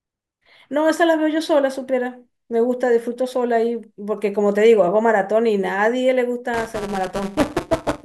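From 6.53 s to the end, buffer tearing: writer and reader pointers have slipped, so a slice of each period replays audio about 10 ms old, giving a robotic 188 Hz buzz that fits a 256-sample buffer. It appears as vertical spectrogram stripes and repeating steps in the waveform.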